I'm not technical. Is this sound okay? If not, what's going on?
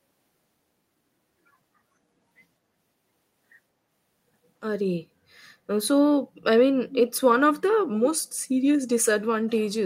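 No. From 6.89 to 7.1 s, an echo leak, likely a speakerphone's echo canceller not fully working, sends back a faint copy of the speech 0.22 seconds late.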